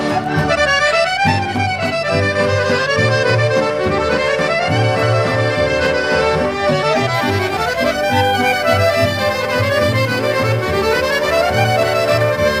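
From 7.14 s to the end, the audio carries sample clock jitter: an unstable converter clock mistimes samples by several microseconds, adding a hiss-like roughness roughly 25 dB below the signal that swells on loud, bright passages and drops away in quieter moments.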